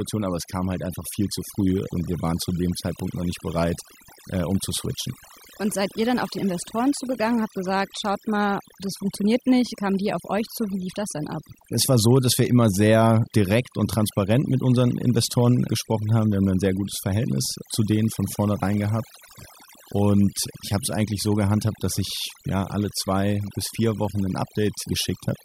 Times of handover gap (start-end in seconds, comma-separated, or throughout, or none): none